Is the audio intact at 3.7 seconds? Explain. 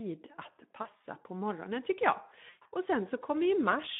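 No. The Speex codec affects the whole clip, including 3.7 s. Its coarse excitation coding leaves speech hoarse and noisy, fitting roughly 11 kbps, within a 150 Hz to 3.6 kHz band.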